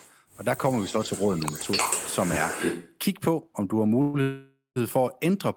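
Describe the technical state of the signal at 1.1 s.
At 1.1 s an echo leak (0.68 to 2.96 s) repeats the sound about 311 ms late, only a few dB below the original, likely from incomplete echo cancellation. A spectrogram shows duplicated harmonic patterns shifted right.

Speech suppressed in double talk (0.84 to 1.55 s) also dips the talker by a few dB over about half a second, likely as the canceller attenuates during overlap. The waveform envelope visibly sags there.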